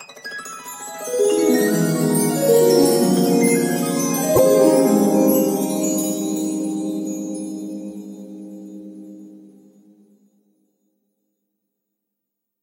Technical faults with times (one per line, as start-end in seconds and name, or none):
4.35-4.39 broken MP3 bit reservoir